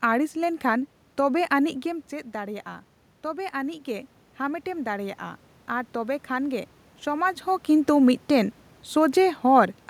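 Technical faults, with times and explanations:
3.22–7.34 s, automatic gain rising: the input fell by about 10 dB, so the gain control slowly added about 4 dB, swelling voice and room noise together before "ᱦᱚᱸ ᱠᱤᱱᱛᱩ ᱢᱤᱫᱴᱮᱱ".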